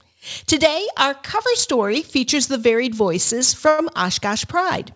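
A short stall from a late packet occurs at 3.69 to 3.80 s. The next packet had not arrived when playback needed it, so the jitter buffer ran dry and the receiver held the last sound for about 98 ms, giving a stretched sustain with a slight buzz or dip before resuming from the same point. Nothing is lost, but everything after it plays about 98 ms later. The absence of content above 8 kHz throughout fits the G.722 call codec.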